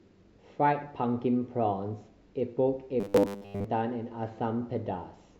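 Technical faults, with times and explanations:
3.00–3.64 s, robotic sound from repeated short buffers: a rigid 100 Hz metallic buzz, likely from a repeated 10 ms stretch covering most of the audio, not random crackle.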